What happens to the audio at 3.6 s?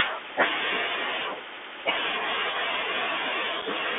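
A very short hole with abrupt edges at 3.62 s, about 7.5 ms where the sound simply drops out and may tick at each edge. This is unconcealed Bluetooth headset packet loss: a gap that fits a couple of lost voice packets between headset and phone was filled with silence or an idle pattern instead of being patched over, and the sound returns briefly quieter. Around it, the Bluetooth CVSD headset codec keeps everything within roughly 250 Hz to 3.5 kHz, with scratchy s sounds and a granular hiss, and its one-bit, 64 kHz up-or-down steps can't keep pace with loud high content.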